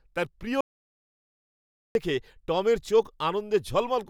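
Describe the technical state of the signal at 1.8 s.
At 1.8 s the speech is in an audio dropout to silence from 0.61 to 1.95 s: silence with no room tone, likely from lost input while recording continued.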